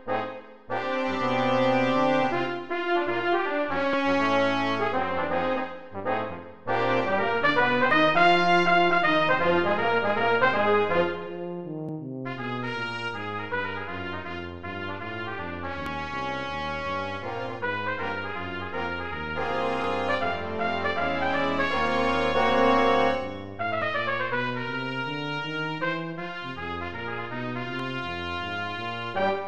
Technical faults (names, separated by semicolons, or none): audio missing between chunks